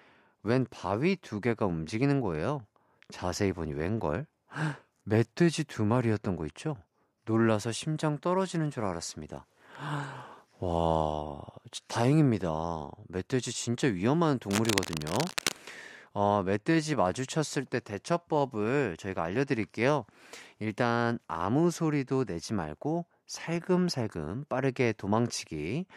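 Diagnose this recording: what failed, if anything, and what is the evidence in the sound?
A dense, uneven scratching rustle runs under the speech from 14.51 to 15.56 s, only slightly quieter than the speech. This is cable scratch noise, likely from a worn cable or connector in the analogue wiring whose contact resistance changed as it moved.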